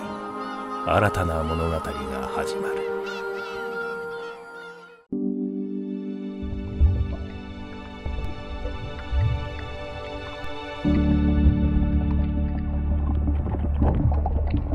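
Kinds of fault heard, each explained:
Audio missing between chunks: at 5.06 s the sound jumps forward, with about a tenth of a second gone and the two sides butted together without any silence. This is likely the recorder dropping audio while closing one chunk and opening the next.
DC step: at 8.25 s and 10.44 s the waveform's zero line abruptly shifts, each jump heard as a low thump beneath the continuing sound. Each offset then dies away gradually, as a roughly 2 Hz high-pass would drain it back toward zero.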